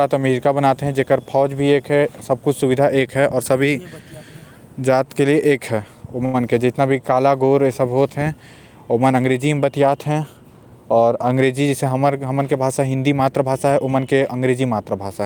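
At 6.25 to 6.36 s the speech hits a short stall from a late packet. The jitter buffer ran dry, so about 85 ms of the last sound is stretched with a slight buzz or dip. Nothing is lost; everything after lands 85 ms late. On a spectrogram the harmonics flatten into a smeared horizontal band.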